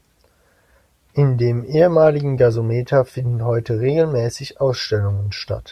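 No technical faults are audible.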